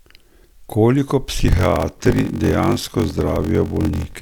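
From 1.38 s to the end, a block size mismatch (padded) sets in. One stage writes shorter blocks than the next reads, fitting 1024-sample reads, with zeros filling each remainder. The gaps give a 46.9 Hz buzz, and speech slows to 0.861 times speed at about normal pitch.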